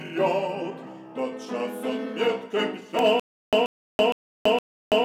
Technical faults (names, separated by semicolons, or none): electrical switching spike; stutter with silent gaps